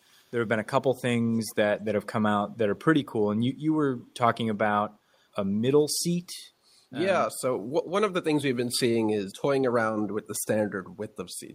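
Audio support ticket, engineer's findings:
Faint delayed copy of the talker's own speech, trailing about 347 ms behind, in short scraps: 0.16–0.32 s very faint, 1.32–1.55 s strongest at about 25 dB below the speech, 1.86–1.94 s faint again. Echo leak. Likely the far end's loudspeaker playback reaching its microphone, with that side's echo canceller leaving residue unremoved and sending it back. Fixed delay, only intermittent leakage.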